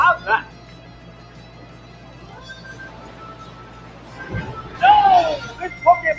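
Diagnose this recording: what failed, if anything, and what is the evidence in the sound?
Throughout, held tones and tails sink while attacks punch through, so the sound pumps and thins, with level swings of around 20 dB. This is a noise suppressor applied to music or sounds in the call processing stage: a speech-tuned suppressor treats sustained content as noise and turns it down. The call's 8 kHz bandwidth limit is normal.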